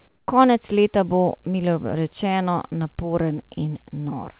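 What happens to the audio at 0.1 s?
From 0.08 to 0.28 s the background becomes a steady, featureless hiss about 4 dB off level, likely comfort noise in place of the background during a transmission pause.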